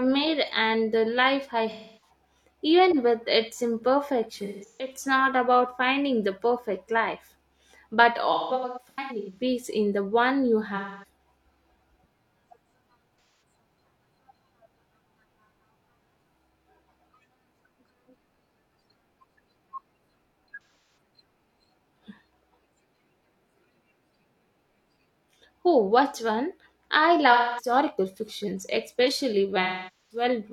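AAC frame loss with concealment strikes this speech eight times: 1.72–2.10 s after "and the life I", 4.38–4.94 s before "not about finding the", 8.33–9.42 s, 10.76–11.04 s, 13.22–13.40 s, 20.54–20.97 s, 27.32–27.72 s between "what one I" and "fictions especially", and 29.62–30.24 s. The decoder patches each missing stretch from the last good spectrum, so the sound turns smeared and noisy there.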